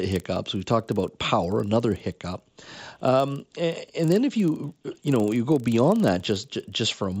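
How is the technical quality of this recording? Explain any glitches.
The recording is marred by one fault that runs through the whole speech clip: a resampler restarted on every block. The conversion from 16 kHz to 48 kHz was done block by block, with 40 ms blocks, and at each block boundary the filter lacked the true neighbouring samples, leaving a small error at every edge. The result is a steady ticking buzz at 25 Hz riding under the speech, present only while someone is talking. On a spectrogram it appears as faint vertical lines every 40 ms across the spectrum. In the waveform there are small steps or kinks at each block edge.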